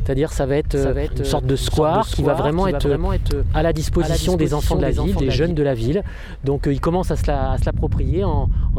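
A doubled audio track runs from 0.75 s to 5.51 s. A second, full-band copy of the sound trails the original by about half a second, at around 5 dB below it, so every event is heard again a beat later as a dry, distinct repeat with no decay or room colour. It cuts in and out abruptly at those two points. This is likely the same signal reaching the mix twice, once through a slower path.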